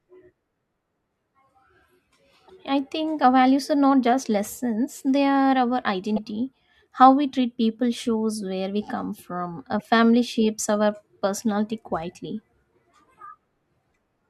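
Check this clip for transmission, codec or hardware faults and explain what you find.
Three brief disruptions, all of the same kind: a broken MP3 bit reservoir, likely from dropped frames. They occur at 2.47–2.50 s, 6.15–6.19 s and 9.78–9.81 s, each about 30 ms, close to one 26.1 ms MP3 frame. After a gap, the next frame reaches back for reservoir data and decodes bytes belonging to a different frame. The speech skips forward, and each point carries a short chirp, burst of noise or hole lasting about a frame.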